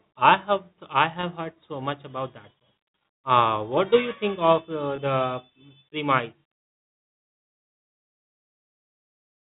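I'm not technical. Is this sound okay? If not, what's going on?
No. There are two tiny dropouts from packet loss with pitch repetition, at 1.21 to 1.23 s, just before "heard so much about", and at 4.96 to 4.98 s, right after "you think of uh". About 20 ms of audio went missing each time. The receiver filled each gap by repeating the last bit of voice, so you hear a brief buzzy hold. The telephone-style sound quality you hear is normal for a phone line.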